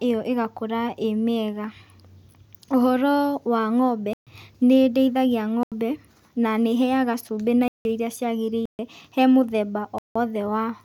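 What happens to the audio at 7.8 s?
At 7.68 s the speech drops into a block of digital silence lasting 0.17 s, until 7.85 s. A block of samples was replaced with zeros, which fits an 8192-sample buffer left unfilled. The cut has no fade, and it is heard as a short hole.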